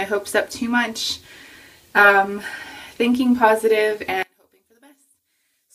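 From 4.23 s to the end at 5.75 s the sound collapses by about 32 dB into a faint residue, likely from one channel inverted cancelling in mono.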